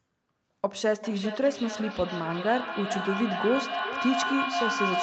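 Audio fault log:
0.96–5.02 s, feedback echo between two devices: from 0.96 s each stretch of speech returns roughly every 0.4 s, thinner and more ringing with each pass, the loudest repeats only about 3 dB below the speech itself. A second device in the room is playing this call aloud, and this microphone picks that playback up again. Its echo canceller removes only what its own device plays, so the loop keeps circling, within the call band that stops at 8 kHz.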